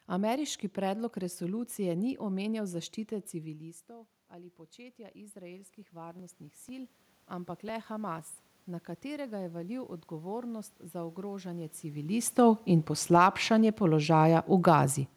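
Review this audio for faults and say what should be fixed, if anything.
Automatic gain rising appears twice. Just after "predlog resolucije ni omenjal", the input drops by about 18 dB as the talker moves back around 3.5 s. From 2.68 to 8.35 s the gain control slowly climbs about 9 dB to compensate. A second, smaller rise of about 4 dB runs from 9.03 to 12.12 s. Unlike a talker simply moving, the room noise swells along with the voice over several seconds. Fixing the gain manually, or slowing and capping the AGC, would prevent this.

Periodic USB or driver dropouts occur between 6.19 and 8.19 s. About five tiny gaps are spaced 0.5 s apart, and each is roughly a millisecond of audio skipped outright rather than filled with silence. They sound like regular ticks. Their strict even spacing, and the fact that they are heard only under signal, set them apart from random clicks or clipping, which follow the loudness of the sound instead. 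Stopping the background task that stalls the bus or driver, or enlarging the audio buffer, should remove them.

Automatic gain falling runs from 12.38 to 14.83 s. The talker moves around 12 s, and the control then pulls the level down by about 4 dB. The level sinks gradually, and the background noise drops with it. That tells it apart from a talker leaning away, where only the voice would fade and the room would stay constant. Setting a fixed gain, or a slower and narrower AGC range, would stop the level from pumping like this.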